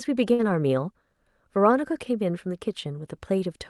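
A burst of packet loss from 0.33 to 0.41 s makes the receiver stretch and fade the last sound, then resume with about 60 ms skipped.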